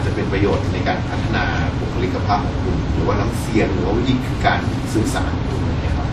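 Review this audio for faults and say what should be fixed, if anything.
Throughout, the speech carries stacked compression artefacts, likely from transcoding between lossy codecs: a spectrogram shows a hard ceiling at 14.4 kHz and smeared, blotchy upper bands. Prevent it by encoding once, from the original uncompressed source.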